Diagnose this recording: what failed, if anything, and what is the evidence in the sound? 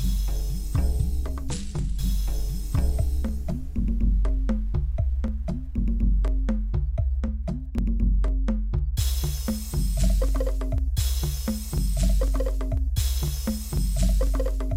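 The failure is in the driver or buffer stage: periodic USB or driver dropouts, where a background task stalls the USB bus or audio driver every 0.5 s. At each stall roughly a millisecond of audio is skipped outright rather than padded with silence, so the waveform jumps and leaves a small discontinuity. From 0.29 s to 14.27 s this produces about thirty evenly spaced ticks, heard only where the sound carries signal.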